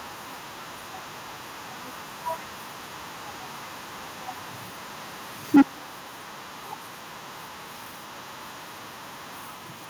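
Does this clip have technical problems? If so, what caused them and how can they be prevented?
Yes. Microphone overload at 5.55–5.62 s flattens peaks about 12 dB over full scale, with about half the samples clipped. Unlike codec distortion, the crackle tracks only the loudest syllable, most likely from input gain set too high. Lowering the microphone input level prevents it.

The microphone volume stepped down at 5.56 s, a sudden drop of about 2 dB in voice and background together. That separates it from a fade or noise gate. It was likely triggered by the overload. Setting a safe level beforehand prevents it.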